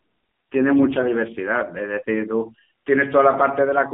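Throughout, the speech has passed through the AMR narrowband mobile codec at what sounds like 7.4 kbps, with the line band running roughly 200 Hz to 3.5 kHz. At so few bits, the vocal-tract model and sparse pulses leave the voice plainly buzzy, thin and synthetic.

From 0.72 to 1.14 s, AMR bit errors strike nearly every frame in that stretch. Flipped, weakly protected bits misplace the excitation pulses and skew pitch, gain and spectral detail, at an error rate of a few percent, so the voice turns hoarse, scratchy and gargly while keeping its level.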